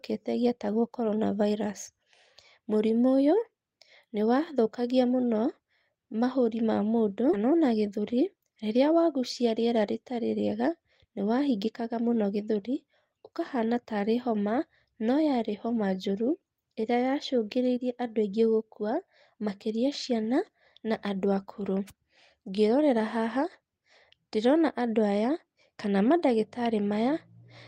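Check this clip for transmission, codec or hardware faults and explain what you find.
Two faults occur in this speech clip, about half a second apart.

At 7.33 to 7.35 s there is a skip ahead: roughly 0.7 s of speech was discarded and the two sides joined directly. Unlike a dropout, no silence or concealment fills the jump.

From 7.92 to 8.54 s, just before "rĩrĩa wagucia rĩera", a jitter buffer speed-up trims pitch periods, roughly 70 ms in total. Speech runs about 9% faster yet keeps its pitch, unlike a resampling error.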